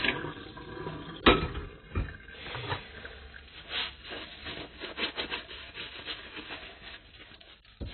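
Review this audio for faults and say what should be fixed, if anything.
Throughout the clip, the audio carries heavy AAC compression damage, likely from AAC-LC at a very low bitrate, roughly 16 kbps. Nothing is present above about 4.3 kHz, so the sound is dull. The encoder, short of bits, quantised the frequency lines coarsely, which smears detail and leaves a warbling texture. A plain low-pass filter would give the same dull top but keep the remaining band clean; here the band below the cut-off is damaged too. To prevent this, encode at a substantially higher bitrate or keep a lossless master for distribution.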